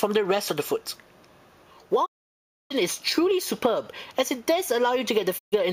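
A digital broadcast dropout cuts the sound from 2.04 to 2.72 s, and a second, shorter one from 5.37 to 5.54 s. The receiver lost valid frames and muted until good ones returned, so each gap starts with a fast fade of about 20 ms into silence. The audio then resumes further into the programme. The 640 ms and 128 ms sent during those holes are simply gone.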